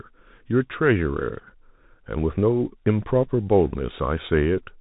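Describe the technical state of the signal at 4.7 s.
At 4.7 s the speech is still passing through a Bluetooth CVSD headset codec, as it does for the whole clip. CVSD encodes each sample as a single up-or-down bit, with a step size that adapts, consistent with a 64 kbps stream. Nothing above 3.8 kHz survives, so the sound is narrow and muffled. The damage is plainly audible: loud high-frequency energy outruns the step size and distorts, sibilants turn scratchy, and a granular hiss sits beneath the speech.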